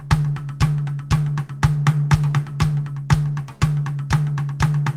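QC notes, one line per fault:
No technical faults are audible in this music clip.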